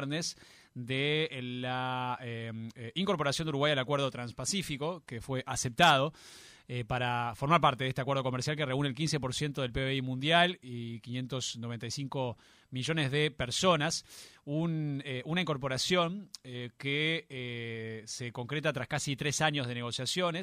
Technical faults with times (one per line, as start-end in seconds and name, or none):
none